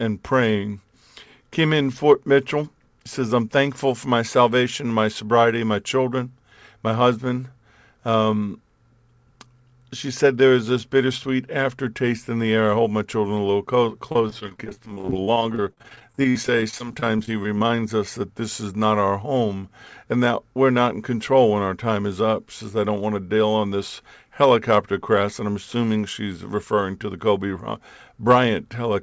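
From 14.12 to 17.82 s, just before "us that this is", repeated packet loss chops the speech into robotic fragments. Unlike a single dropout, the holes keep recurring, and each is briefly patched by stretched sound.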